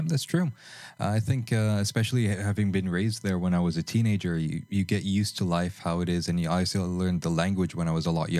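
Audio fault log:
throughout, USB whine: a steady, fixed-pitch whine sits under the speech for the full clip, built on 1 kHz with its strongest component at the 2 kHz harmonic. It sits low, roughly 40 dB below the signal. USB host activity draws current in 1 ms frames, and that periodic pulsing gets into the audio path through shared power or ground, producing a 1 kHz tone and its multiples.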